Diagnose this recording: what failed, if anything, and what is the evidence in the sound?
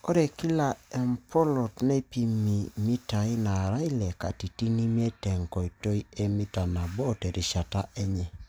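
Nothing in the speech here points to a failure at any stage, so there's no fault to diagnose and no evidence to chase down.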